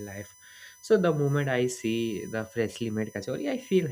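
A USB whine runs through the whole speech clip. It is a fixed-pitch tone built on 1 kHz, with its strongest harmonic at 6 kHz. It sits roughly 25 dB below the speech. The bus draws current in 1 ms frames, and that current leaks into the audio path through power or ground.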